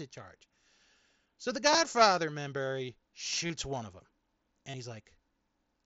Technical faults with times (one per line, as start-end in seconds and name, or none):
1.71-1.78 concealed Bluetooth headset packet loss
3.46-3.50 concealed Bluetooth headset packet loss
4.70-4.74 concealed Bluetooth headset packet loss